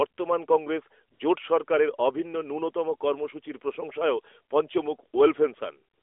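Speech heard over an AMR narrowband mobile link, with the line limited to roughly 300 Hz to 3.5 kHz and light codec colouring that points to the 12.2 kbps mode, has two AMR comfort noise dropouts. The sending phone judged the talker silent and stopped sending speech frames, so the receiver filled the gaps with synthetic noise. This happens for about 60 ms from 1.14 to 1.20 s, just before "জোট সরকারের অভিন্ন ন্যূনতম", and again for the final 95 ms, from 5.94 s to the end. In both places the real background gives way to a smooth, steady hiss.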